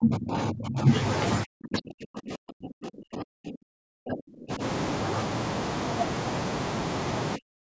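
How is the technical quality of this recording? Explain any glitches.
The speech is repeatedly pulled down in level at 0.00 to 0.92 s, 1.43 to 4.62 s, and 7.36 s to the end. This is likely speech suppressed in double talk. The echo canceller, unable to separate this talker from far-end echo, attenuated both, dipping the voice by around 30 to 40 dB. The call microphone processing limits the audio to 8 kHz.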